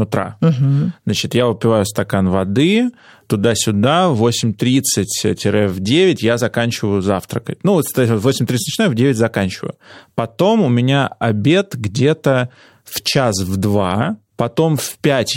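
No technical faults can be heard anywhere in the speech. Nothing at any point in the audio calls for comment.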